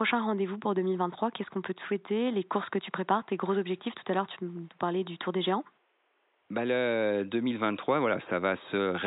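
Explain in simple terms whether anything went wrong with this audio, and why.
Nothing went wrong with the recording: the speech comes through steadily with no technical problems, and the faint background noise of the room is just part of where it was recorded, sitting well below the voice.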